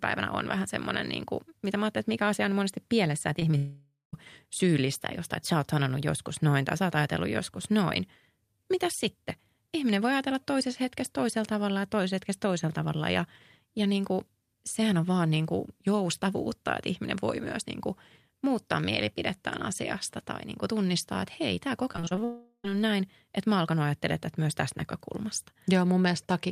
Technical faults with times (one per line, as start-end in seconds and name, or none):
3.39-3.55 short concealed packet loss
3.57-4.15 long network dropout
21.93-22.21 repeated packet loss (robotic sound)
22.24-22.66 long network dropout